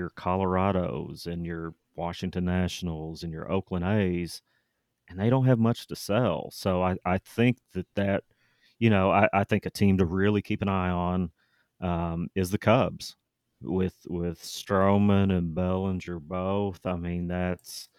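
At 14.15 s the pace suddenly drops and stays slow right to the end: the audio plays at roughly 0.65 times its normal speed, but the pitch doesn't fall with it. That's a time-stretched section, and it drags. The likely cause is software stretching that stretch to fill a longer slot, keeping the pitch steady by repeating short slices of the signal.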